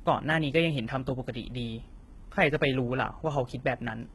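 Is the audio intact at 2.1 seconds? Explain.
No, not really. At 2.1 seconds you're hearing the same damage that runs through the whole speech clip, which sounds like heavy HE-AAC compression at a low rate, something around 16 kbps. The codec keeps only the lower spectrum and fakes the treble by copying lower bands upward under a rough envelope, so the highs don't line up with the real harmonics. S sounds come out gritty and lispy, and nothing reaches above about 11.8 kHz.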